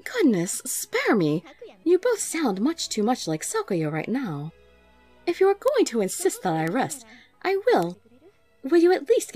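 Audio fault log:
2.85, 5.68, 6.68 and 7.83 s, bit error spike: single ticks, one or two samples long, peaking at about −32, −8, −14 and −14 dBFS. A flipped bit jumps the value and returns at once, so there is no gap, ringing or link to the signal as a dropout click or edit would show.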